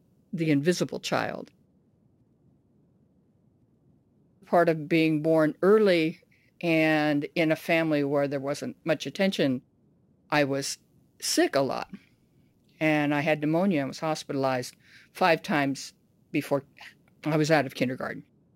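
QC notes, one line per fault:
Throughout: sample clock jitter. A fine hiss and grain ride on the speech, thickening on loud passages and sibilant, high-frequency sounds and disappearing entirely in the pauses. The converter clock is wandering by a few microseconds rms, so each sample is captured slightly off its proper instant. Steep, fast-moving parts of the waveform turn that timing error into a large amplitude error, which here sits only about 30 dB below the signal.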